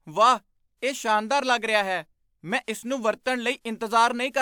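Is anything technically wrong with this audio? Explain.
No, nothing in this speech recording stood out as technically wrong on listening.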